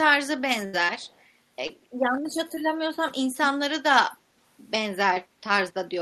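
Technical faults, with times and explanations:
0.65 to 0.75 s, burst of packet loss: about 80 ms of audio failed to arrive, and the receiver stretched the preceding sound for about 76 ms while fading it out, giving a brief held buzz or hiss. The speech then picks up slightly later, with that stretch gone.
1.00 to 1.24 s, 3.36 to 3.49 s and 4.11 to 4.17 s, echo leak: a copy of the speech returns 153 ms late, faint near 1.0 s, much clearer near 3.4 s and faint again near 4.1 s. This is likely loudspeaker sound at the far end that the echo canceller failed to fully remove.
1.67 to 1.71 s, short concealed packet loss: 20 ms of audio went missing, and the decoder filled it by carrying on the previous sound before blending back into the real signal. The result is a brief smear or wobble in the speech.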